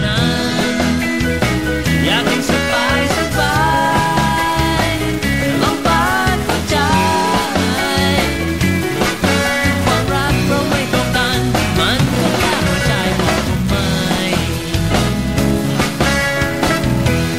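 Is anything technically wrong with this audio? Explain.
No, nothing technically wrong can be heard here.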